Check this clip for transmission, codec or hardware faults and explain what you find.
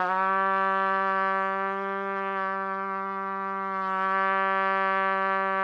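Nothing in this recording points to a transmission, codec or hardware fault. The sound continues steadily, with no break, distortion or other disturbance to report.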